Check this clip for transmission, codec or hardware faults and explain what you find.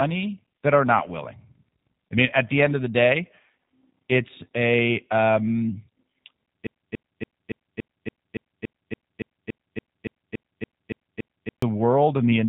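Two faults: a G.729 codec colours the whole recording, and a broken-record loop takes over most of the second half.

G.729 codec, throughout. Nothing survives above about 3.8 kHz, and the speech has that rough, slightly synthetic edge you get when a coder rebuilds each short frame from a vocal tract model, a pitch predictor and a handful of pulses instead of the real waveform. The damage is plainly audible, and the character fits G.729A running at 8 kbit/s.

Broken-record loop, 6.67 to 11.62 s. A 0.28 s fragment plays 17 times back to back, identical each time, so the speech just stutters in place for nearly five seconds. Whatever should have been heard in that stretch is gone. The likely cause is the player, encoder or stream stalling and re-sending the last chunk it was holding until the flow resumed.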